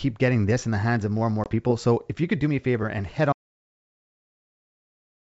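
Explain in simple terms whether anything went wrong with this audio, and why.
At 1.44 s there is packet loss on an ADPCM call: about one packet, 20 ms of speech, is replaced by a hard-edged gap. The decoder briefly loses track, so speech returns slightly off until 1.48 s.

From 3.33 s to the end there is an audio dropout to silence. The sound stops completely, with no background left, most likely because the input link or device cut out.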